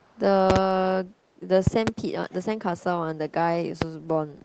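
Speech with two kinds of fault. Echo leak at 0.0–0.2 s and 2.29–2.38 s: a faint copy of the speech trails it by 412 ms, very quiet at first and then more noticeable. This is likely residue that a loudspeaker-side echo canceller missed. On a spectrogram it appears as a weak duplicate of the speech harmonics shifted later in time. Loud pops come as pairs at 0.50–0.58 s and 1.67–1.90 s and singly at 3.82–3.84 s, peaking about 20 dB above the speech. These are likely voltage spikes from a plug, switch or driver glitch. On the waveform they are tall narrow spikes, and on the spectrogram they are full-height vertical lines, which stop at 8 kHz like everything else in the call's band.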